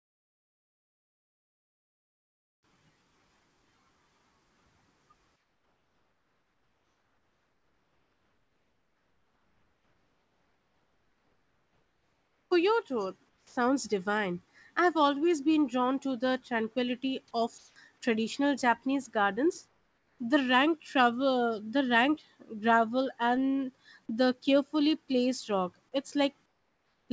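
From 5.36 to 12.51 s the pause between phrases carries comfort noise in place of the background. The real room sound, already about 46 dB below the loud parts, gives way to a steady, featureless hiss about 6 dB quieter. The likely cause is discontinuous transmission: the sender stopped sending during silence and the receiver synthesised noise shaped like the background. On a spectrogram the textured background becomes a smooth, uniform wash, topping out at 8 kHz like the rest of this G.722 call path.

At 13.29 to 13.56 s comes sound dropped by the voice detector. About 110 ms of speech, most likely a quiet ending the detector took for background, is lost, and the 270 ms stretch plays flat noise instead. The waveform shows the speech envelope cut off abruptly and followed by a low, even band with no speech structure.

The same comfort-noise swap returns at 17.58 to 17.76 s, here about 1 dB louder than the background it replaces. 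It returns at 19.68 to 20.19 s, about 5 dB quieter, and again at 26.46 to 27.09 s, about 6 dB quieter. Each shows on the spectrogram as a block of even, structureless noise, and on the waveform as a small step in the floor level at its edges.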